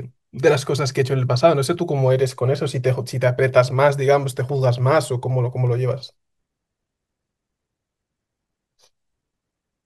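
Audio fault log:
No faults were found in the speech recording. There is nothing to log at any time or range.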